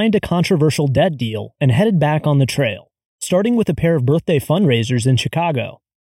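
From start to finish the speech has a hollow, phasey quality, and it's channel delay (comb filtering). One side of a stereo pair ran about 0.4 ms behind the other, and once the two were folded to mono the shared content cancelled at evenly spaced frequencies. The first notch sits around 1.5 kHz, with more at regular intervals above it. Because the delay never changes, those notches stay put for the whole clip.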